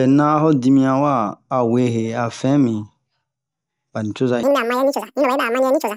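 From 4.43 s to the end, the speech jumps into a wrong sample rate fault: it plays at twice its speed and a full octave higher, which fits audio recorded near 22 kHz played back at 44.1 kHz. Unlike a pitch shift or time-stretch, tempo and pitch rise together.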